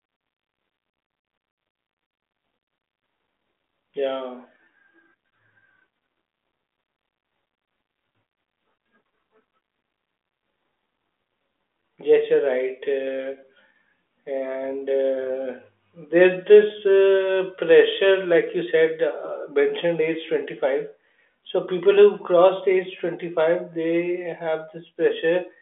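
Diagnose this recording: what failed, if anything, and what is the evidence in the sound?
Nothing failed: the speech sits in a telephone band of roughly 200 Hz to 3.5 kHz with nothing above 3.8 kHz, consistent with a G.726 ADPCM path running at a high rate such as 40 kbit/s, and any quantisation hiss riding on the speech is faint at most.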